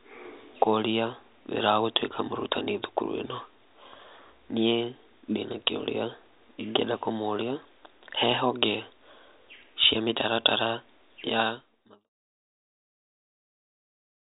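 No technical faults can be heard anywhere in this recording.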